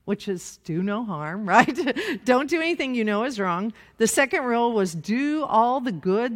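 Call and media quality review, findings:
Call and media quality review findings: no faults found in the speech.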